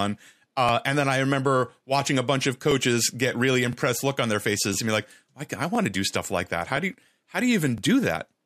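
At 0.69, 1.70, 2.71, 3.73, 4.74, 5.75, 6.77 and 7.78 s the speech has a small stutter from overlapping chunks. The audio was handled in 1-second blocks, and each block restarts about 13 ms before the previous one ended, so that sliver plays twice at every join. Unlike a dropout, nothing is missing. Instead a brief doubled fragment sounds like a tick, and these recur at a steady interval of just over one second.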